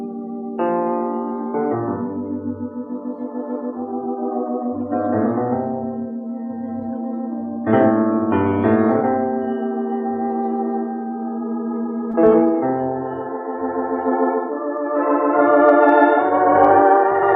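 The audio has one brief smear at 12.11 to 12.15 s, a wobble lasting a few hundredths of a second. This is short concealed packet loss: about 20 ms of the stream arrived too late, and the receiver extended the preceding sound to fill the gap before blending back into the real signal.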